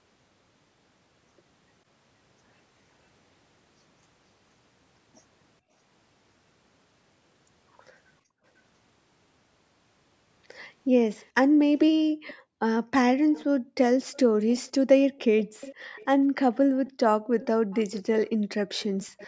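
Speech, carried through call-style mic processing with nothing above 8 kHz, with two problems. First, the background gets gated by the echo canceller at 8.22–8.44 s, 11.48–13.76 s and 15.44–17.32 s, where the room sound ducks by up to about 40 dB while the far end plays. Second, there's an echo leak: a faint copy of the speech trailing by roughly half a second (507–531 ms) at 11.17–11.28 s, 12.27–12.34 s, then steadily from 13.32 s to the end, climbing from about −35 dB to about −20 dB, most likely the loudspeaker feeding back past the canceller.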